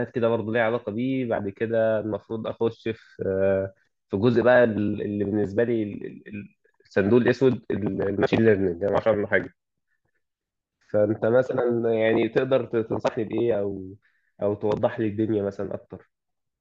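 Nothing in this speech recording stands out as a technical fault, so there's nothing to point to along the way.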